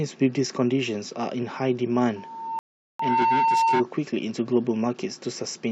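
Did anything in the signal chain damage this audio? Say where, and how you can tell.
Yes. At the acoustic stage, a loudspeaker feedback squeal starts at 2.16 s: a single tone at 906 Hz swells over roughly 0.7 s and then sits about 5 dB above the speech until 3.84 s. The microphone is hearing its own loudspeaker, and at that one frequency the loop gain exceeds unity, so the tone feeds itself. It is a steady pitched howl that grows from nothing, not a broadband hum or a fixed whine, which identifies it as feedback.

At the playback or network stage, a rebuffering stall cuts the audio to silence from 2.59 s to 3.00 s. The player ran out of downloaded data, waited, and resumed at exactly the point where it stopped, adding 405 ms. Because nothing is skipped on resumption, this is a stall and not packet loss or a dropout. The squeal is cut off with everything else during the gap.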